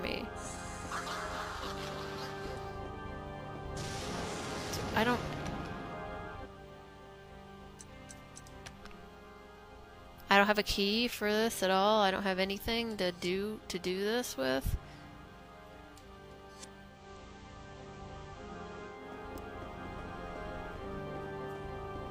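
Digital radio blending to analogue runs from 16.86 to 19.08 s: the receiver lost its digital stream and cross-faded over 238 ms to the FM broadcast. Hiss rises, faint but audible, and the level shifts by about 2 dB before it blends back.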